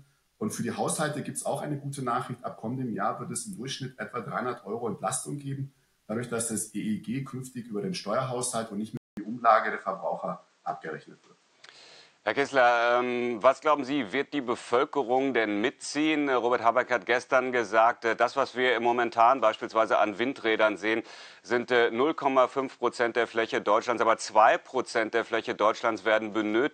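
An input switched to a poorer device at 8.97 s: after a 200 ms silence, the audio turns duller, with nothing above 8.7 kHz, a level shift of about 5 dB, and a new noise floor roughly 40 dB down, likely from recording moving to a different microphone or headset.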